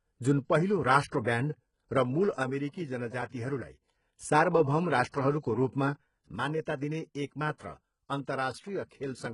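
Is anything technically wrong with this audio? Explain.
Yes, two faults are audible.

Throughout the clip, the speech shows heavy damage that likely comes from HE-AAC compression at a very low rate, consistent with roughly 12 kbps. The codec keeps only the lower band and rebuilds the treble by copying lower bands upward under a coarse envelope. The upper harmonics therefore don't line up with the real ones, and s sounds come out gritty and metallic. On a spectrogram, the energy stops at 11 kHz, and the upper band looks smeared and repetitive rather than following the lower harmonics.

A sudden gain jump occurs twice. From 2.43 to 3.82 s, and again from 6.36 s to the end of the clip, the level drops by about 6 dB in a single sample step, likely because a gain setting was applied without a ramp. The speech and the background noise fall together and then, at 3.82 s, step back up. On a waveform, each affected stretch is a block with a visibly lower envelope and abrupt vertical edges.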